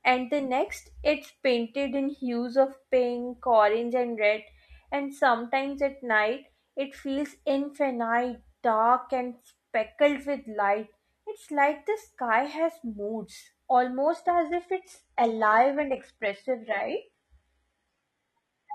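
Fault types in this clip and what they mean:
Adaptive stream at a lower bitrate, from 14.11 s to the end: the speech abruptly loses its crisp top end and takes on a thin, synthetic sheen, with rising codec artefacts, yet no gap or dropout marks the change. That points to a streaming player stepping down mid-playback to a much cheaper encoding, consistent with a shift from AAC at around 96 kbit/s to HE-AAC near 16 kbit/s, whose reconstructed highs sound artificial.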